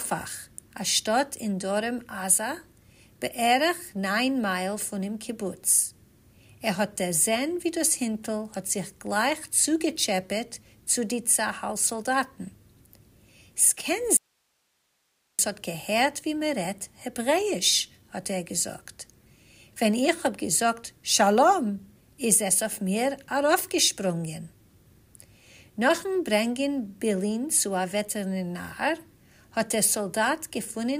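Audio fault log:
14.17–15.39 s, audio dropout to a faint residue: the sound cuts out abruptly for about 1.2 s, leaving only hiss around 45 dB below the normal level, then snaps back. Likely the signal feed broke briefly while everything downstream stayed live.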